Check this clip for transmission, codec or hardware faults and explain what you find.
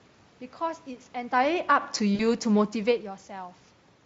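Two transmission faults appear in this speech, carried over a lightly coded Speex link.

From 1.29 to 2.86 s, automatic gain falling: the gain control lowers its level by about 4 dB, so the room noise sinks with the voice, unlike a talker moving away.

From 2.15 to 2.22 s, VoIP packet loss concealed by the speech codec: about 40 ms goes missing, which fits two lost 20 ms frames. The decoder extrapolates, producing a fading buzzy tone or coloured noise rather than a clean silent gap.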